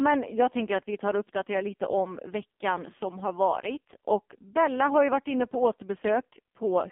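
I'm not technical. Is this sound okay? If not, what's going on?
No. For the whole clip the speech has gone through an AMR narrowband mobile codec at a low setting: everything above about 3.5 kHz is gone, and the voice sounds buzzy and synthetic. A plain telephone filter would only sound muffled, not artificially rebuilt.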